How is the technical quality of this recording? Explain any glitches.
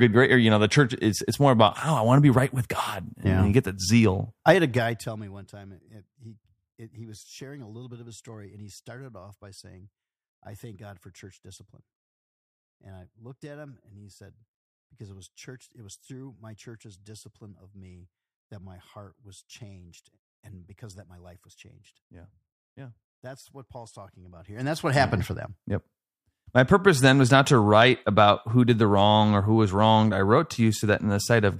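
The recording has two audible glitches, both zipper noise in this speech. The first runs from 4.48 to 5.44 s, after "you get that zeal" and before "time it it he". The level drops by roughly 25 dB. The second runs from 24.16 to 25.16 s, just before "for them". There the level rises by roughly 25 dB. Each fade moves in unsmoothed 1 dB steps, about 30 a second. Each step makes a small click, so a fast ticking buzz rides on the sound while the level changes.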